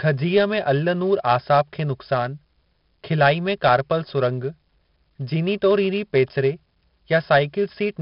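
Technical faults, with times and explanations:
Throughout, 4-bit ADPCM compression. Each sample is coded as a small step from a predicted value, and the step size adapts as the speech moves. The coding error rides along at a fixed distance under the signal, so every loud syllable carries a gritty hiss. Sharp onsets distort where the step lags behind. The damage is heavy. Nothing reaches above 5.3 kHz, which fits a low sample rate near 11 kHz and a stream of roughly 44 kbps. The speech sounds dull as well as grainy.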